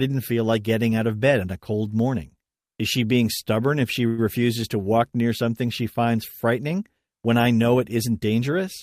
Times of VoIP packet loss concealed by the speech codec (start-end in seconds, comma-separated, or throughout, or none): none